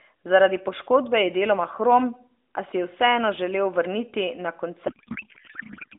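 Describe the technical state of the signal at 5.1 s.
At 5.1 s you're inside a codec payload misread, running from about 4.88 s to the end of the clip. The AMR frames seem packed octet-aligned but unpacked as bandwidth-efficient, so fields land in the wrong places and the speech turns into garbled, warbling noise.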